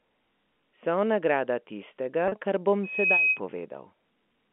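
From 2.28 to 2.32 s, about 40 ms of the stream never arrived, which fits two lost 20 ms packets. This is packet loss with pitch repetition: the receiver fills the gap by repeating the last pitch period, so the speech briefly holds on a slightly buzzy, frozen tone before resuming.

From 2.83 to 3.40 s, a loudspeaker feedback squeal: the microphone is picking up the loudspeaker it feeds, and at 2.5 kHz the loop gain exceeds one. That tone swells over roughly a third of a second into a piercing whistle sitting a few dB above the speech.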